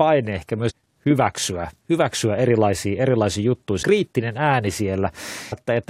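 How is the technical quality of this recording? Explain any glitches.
The recording has two short glitches from damaged data in a compressed stream, at 0.69 to 0.71 s and at 5.52 s. At each, corrupted bytes make the decoder misread frames and resync, giving a brief chirp, squawk, click or short hole. On a spectrogram it appears as a narrow broadband smear; the waveform shows an abrupt discontinuity.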